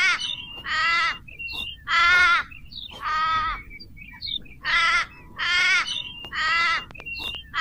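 From 6.25 to 7.36 s, a train of clicks: about ten matching pops at an uneven 7.3 per second, likely interference. Their similar shape distinguishes them from random crackle.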